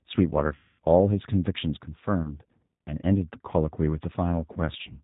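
The whole clip carries G.729 codec damage, and it's plainly audible: speech squeezed to something like 8 kbit/s, rebuilt from a filter, pitch predictor and sparse pulses, so it sounds rough and a bit synthetic, with nothing above 4 kHz. Then comes VoIP packet loss concealed by the speech codec. From 0.55 to 0.80 s roughly 240 ms is missing, which fits about eight lost packets; the decoder stretches the last sound into a buzzy tone or coloured noise that fades. Shorter 30 ms gaps follow at 2.22 to 2.33 s and 4.53 to 4.59 s, each a brief smeared dip.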